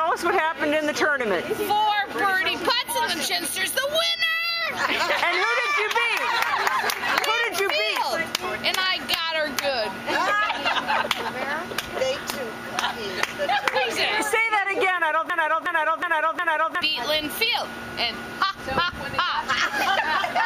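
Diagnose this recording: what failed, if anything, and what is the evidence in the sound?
A broken-record loop from 15.30 to 16.82 s repeats a 0.36 s fragment four times, exact and undecayed unlike echo, likely a stalled playback or stream buffer.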